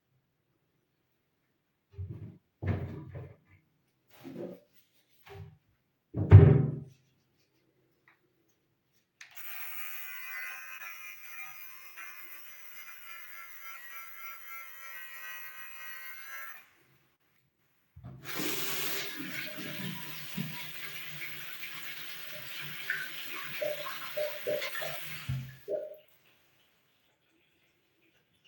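At 10.77 to 10.81 s there's a short concealed packet loss. About 20 ms never arrived, so the decoder carried the previous sound across the gap, leaving a quick smear. At 11.87 to 11.98 s comes a burst of packet loss, with about 80 ms gone. It's bridged by a continuation that fades out before the audio jumps ahead. Two more short concealed losses follow, at 16.52 to 16.55 s and at 17.15 to 17.21 s, where about 20 ms and 40 ms are missing. Each is heard as a brief wobble.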